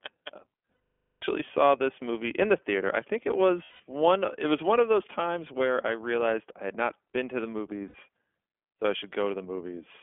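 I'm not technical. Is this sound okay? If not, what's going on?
No. The whole clip has passed through the iLBC codec, a phone-call voice codec. It cuts everything above about 3.4 kHz, which sounds boxy like a telephone, and it adds a slightly rough, synthetic edge. That roughness is what sets it apart from a simple telephone band limit.

There are also lost iLBC frames, where pieces of the call went missing, at 0.74 to 1.24 s (half a second), 3.64 to 3.80 s, and 7.88 to 7.96 s. Instead of silence or a click, each gap is filled by a held, buzzy, breathy vowel-like sound, and the voice comes back straight afterwards.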